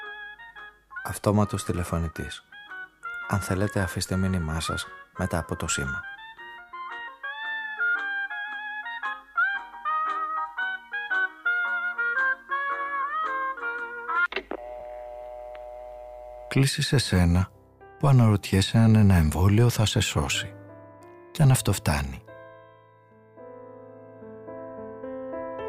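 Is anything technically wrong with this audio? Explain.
No, there is nothing technically wrong with it.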